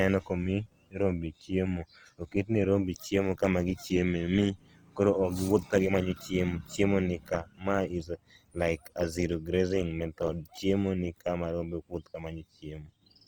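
A speech clip with plainly audible damage from likely Opus compression throughout. The speech turns grainy and rough rather than swirly, as noise fills the thin bands, which fits the music mode at a low bitrate around 24 kbps. Bandwidth still reaches about 20.2 kHz.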